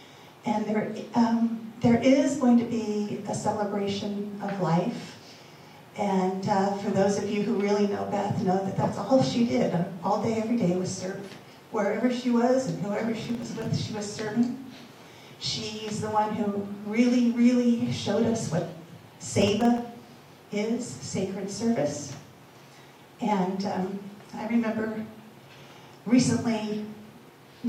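Processor overload crackle appears from 13.23 to 13.66 s and again from 19.42 to 19.82 s. Over and over, very short buffers of under a millisecond went unfilled and left tiny silent gaps. Their clustering gives a gritty tearing, unlike one clean dropout.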